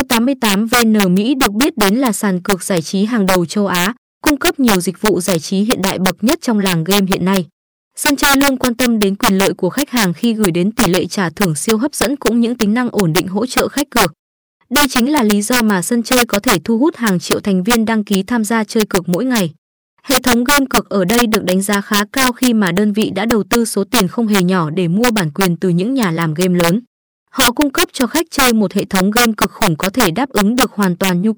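Violent, sharp cracks break out on the loudest moments of this speech recording throughout, far harsher than ordinary clipping. This is integer overflow: a gain pushed the signal about 5 dB too hot, and around one percent of samples wrapped to the opposite sign instead of being limited.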